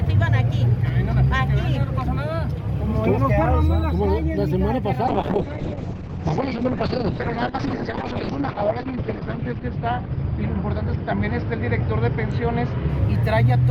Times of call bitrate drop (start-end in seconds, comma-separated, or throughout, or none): 5.08-13.70